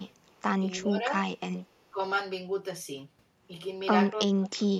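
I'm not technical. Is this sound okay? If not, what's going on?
No. There are two separate problems with this speech.

The first is echo leak, heard as a very faint, delayed copy of the speech, lagging by about a third of a second, at 0 to 0.07 s, 0.29 to 0.34 s and 1.63 to 1.85 s. The likely cause is a speakerphone on the other end whose echo canceller didn't fully remove its own loudspeaker sound, so some came back. Unlike room reverberation, it's a distinct, late repeat rather than a smooth tail.

The second is speech suppressed in double talk. The speech itself drops in volume from 0.6 to 1.15 s and again from 1.91 to 1.99 s. From 4.24 s to the end it nearly disappears. This likely happens when both sides talk at once and the echo canceller turns everything down, the real speaker included.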